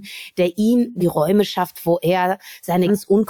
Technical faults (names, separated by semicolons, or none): compressed frames skipped